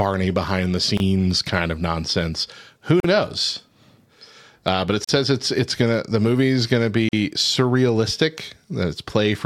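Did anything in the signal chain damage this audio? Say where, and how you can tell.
Yes, at the codec stage: gaps at joins of encoded pieces. Silences open at 0.97 s (26 ms), then 3.0, 5.04 and 7.09 s (43 ms), every 2 s, from untrimmed encoder delay and padding.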